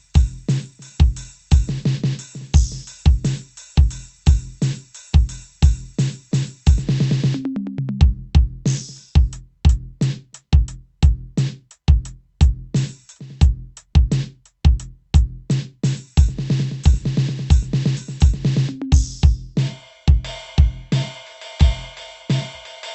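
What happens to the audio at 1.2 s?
Nothing goes wrong at 1.2 s: the music plays through intact, carrying only the steady coding character and roughly 8 kHz top end of the Opus call path it was sent over.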